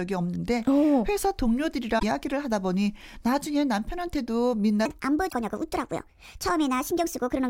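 At 1.96 to 2.03 s there is damaged data in the compressed stream: a short stretch of corrupted frames makes the decoder lose sync and hunt for the next valid header, producing a brief glitch in the speech. From 4.86 s to the end, the section plays at the wrong speed, 1.43 times too fast, likely from a clock mismatch during editing or playback. Pitch and tempo rise together, lifting the voice about seven semitones and making it sound hurried. Inside that fast section, at 5.27 to 5.33 s, a second burst of stream damage gives another short glitch.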